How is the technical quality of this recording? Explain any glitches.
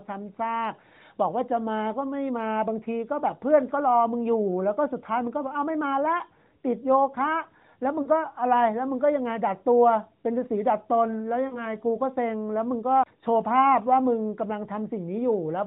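The recording is narrowband mobile speech with nothing above 4 kHz, and it has two short dropouts of lost AMR speech frames. Around 8.02 to 8.08 s and again around 11.48 to 11.67 s, the speech briefly smears and dips, then returns slightly rough. In each case about 40 ms of data, two 20 ms frames, failed to arrive intact. The decoder filled the gap by repeating the last good pitch and vocal tract settings at falling gain, which produces the drawn-out, fading sound.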